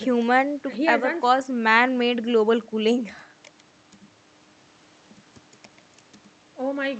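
Speech with no technical faults to report anywhere in the clip. It has passed through a working WebRTC call path, and the top end stops at around 8 kHz, which fits a call codec such as Opus running in wideband mode.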